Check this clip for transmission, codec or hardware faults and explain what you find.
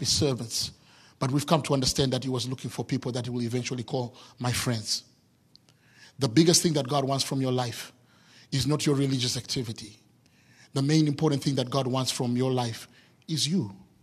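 No transmission, codec or hardware fault can be heard anywhere in the speech recording; the signal stays continuous and stable throughout.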